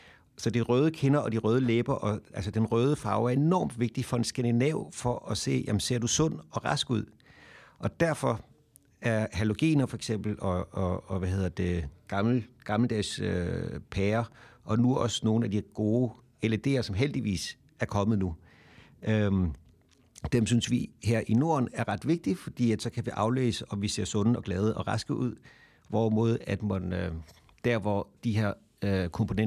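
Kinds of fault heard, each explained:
No technical fault can be heard anywhere in this speech recording.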